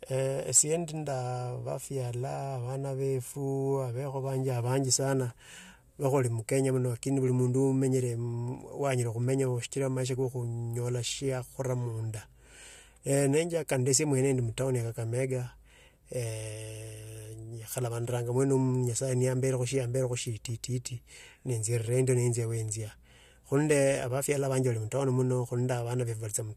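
Hard clipping hits this speech clip three times: 0.56–0.61 s, 13.14–13.98 s just before "mwende ndi mutouuni ya", and 23.56–23.88 s. The signal overdrives a stage by about 12 dB, 8 dB and 4 dB respectively, so the peaks are sliced flat and the squared-off tops add high harmonics. The heaviest overdrive comes first and the lightest last.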